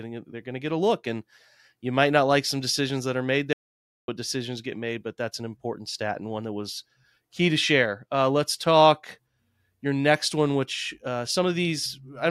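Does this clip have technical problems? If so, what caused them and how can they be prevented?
Yes. At 3.53 s the speech cuts off into an audio dropout to silence lasting about 0.55 s, until 4.08 s, with no room tone in the gap. This is likely a lost input, such as a loose cable or a brief mute, while recording continued writing silence. Secure connections and monitor input levels during capture.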